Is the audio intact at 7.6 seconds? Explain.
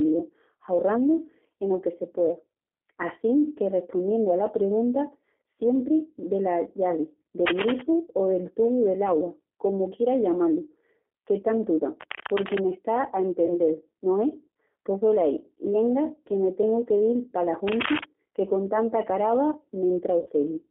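No. From 7.46 to 7.82 s a dense, ragged burst of scratching and rustling sits over the speech, ending just before "o del tubu del'agua", and it is loud enough to stand somewhat above the speech itself. This is cable scratch noise, likely from a worn cable, connector or control being moved so that its contact resistance flickered rapidly, letting uneven bursts of noise into the signal for that third of a second.

Underneath, and at 7.6 s as everywhere else, the speech has a slightly rough, synthetic, narrowband quality with nothing below about 250 Hz or above 3.4 kHz. That is the G.729 codec, here the G.729A variant at 8 kbit/s, and its damage is plainly audible. It rebuilds each 10 ms frame from a vocal tract filter, a pitch predictor and a few pulses rather than the actual waveform, over a telephone-band line.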